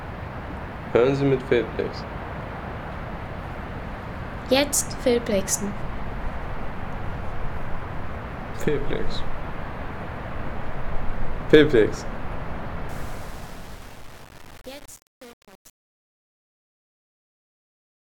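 From 12.89 s to the end at 18.17 s, the fade-out turns gritty and coarse as it sinks toward silence. This is truncation distortion on a fade. The level is rounded to too few steps without dither, which fits a stage keeping only about 7 bits. The tail of the waveform collapses into a handful of square steps.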